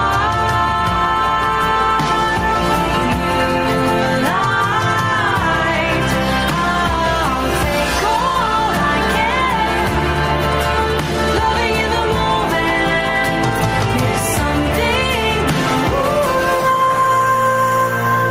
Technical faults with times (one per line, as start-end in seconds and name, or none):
0.00-18.31 gain pumping